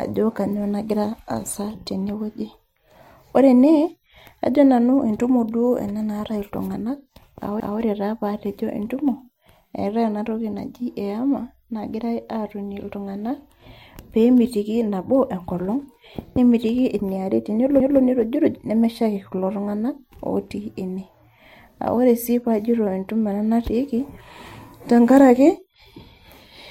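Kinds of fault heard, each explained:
Overlapping chunks: the speech was handled in 10 s blocks, each starting 200 ms before the last ended, so 200 ms plays twice at 7.6 s and 17.8 s as a stutter. The waveform shows a duplicated stretch, and the spectrogram a repeated slice with a sharp seam.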